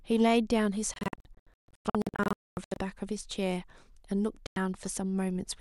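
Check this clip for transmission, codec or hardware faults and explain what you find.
The speech has two digital broadcast dropouts. From 0.94 to 2.77 s, the receiver lost frames or rejected them as corrupt. It muted each time until good frames returned. About 1.1 s of sound goes missing, scattered as short holes across 1.8 s. The longest hole is 240 ms. The sound stutters in and out and drops whatever was sent in the gaps. A second, single 96 ms cut falls at 4.47 s.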